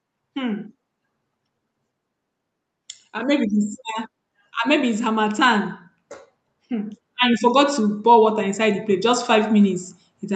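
From 6.68 s to the end at 10.35 s, automatic gain rising sets in. The gain control judges the input too quiet and lifts its gain step by step. Speech and background noise swell together. The climb is gradual over several seconds, not a jump.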